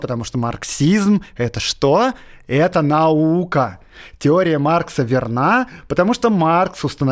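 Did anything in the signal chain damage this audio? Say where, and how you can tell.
No, nothing in this speech recording stood out on listening as damage introduced anywhere along the signal chain.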